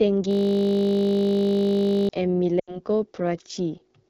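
Speech run through the AMR wideband (HD Voice) codec, plainly rough and raspy throughout, which fits its 8.85 kbit/s mode; a spectrogram shows smeared harmonics and noise-filled bands above 6.4 kHz. From 0.31 to 2.09 s a system hang loop repeats one 20 ms slice, producing a steady 50 Hz buzz with identical waveform cycles and vertical stripes. Lost AMR speech frames at 2.60 to 2.80 s drop the sound to near silence within two frames of an 80 ms loss, which fits four missing frames, appearing as a quickly decaying smear of frozen spectrum.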